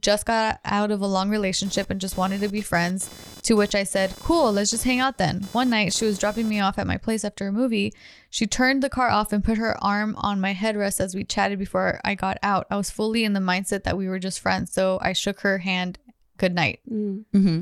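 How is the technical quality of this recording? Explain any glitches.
The recording has one clear glitch: computer activity noise. From 1.65 to 6.62 s, between "out of a long" and "off at my place", a buzzing chirp runs under the speech. It pulses at around 500 Hz. It sits roughly 20 dB below the speech. It comes from processor or peripheral load shifting the shared audio ground. It follows the computer's activity, not the speech.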